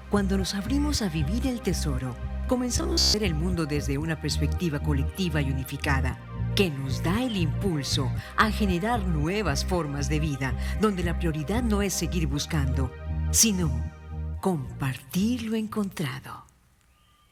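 From 2.78 to 3.14 s, the sound turns into a rigid, metallic buzz near 66.7 Hz. This is robotic sound from repeated short buffers. New audio likely arrived too slowly, so a 15 ms piece was looped in its place for most of that span.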